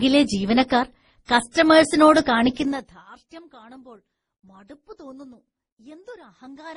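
Throughout, the speech has nothing above 10.5 kHz and carries two layers of coding artefacts, likely from transcoding between lossy codecs, consistent with a low-rate Opus encode re-encoded as MP3.

From 2.56 to 3.04 s, zipper noise: the level drops roughly 25 dB in unsmoothed 2 dB steps, around 30 a second, each producing an audible tick.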